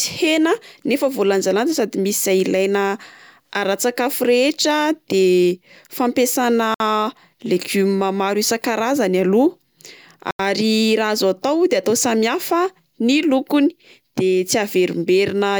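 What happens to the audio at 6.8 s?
A Bluetooth stall interrupts the speech from 6.74 to 6.80 s: the sound drops to silence for about 57 ms, then resumes. The likely cause is interference delaying wireless packets so the headphones' buffer emptied and playback waited for retransmitted data.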